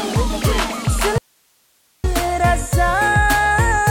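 At 1.18 s the sound cuts out abruptly, an audio dropout to a faint residue lasting about 0.86 s until 2.04 s. Only hiss, roughly 45 dB down, fills the gap, likely because the signal was lost while the path stayed live. The waveform shows a sharp-edged near-flat stretch, and the spectrogram a thin broadband noise band.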